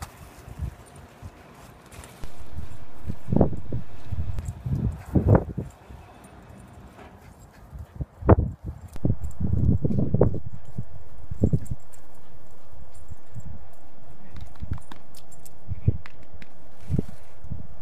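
At 2.24 s a DC step of about -22 dBFS shifts the waveform's zero line, giving a low thump, and it steps back at 4.39 s with a second thump. At 8.96 s the same offset returns and holds to the end.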